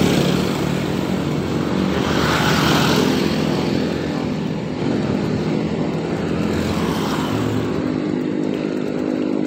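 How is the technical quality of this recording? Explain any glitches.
Nothing stands out here, as there are no glitches, dropouts or other technical faults to point to anywhere in the recording.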